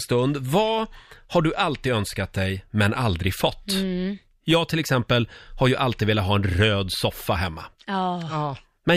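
No technical faults can be heard anywhere in the recording, and the signal stays intact throughout.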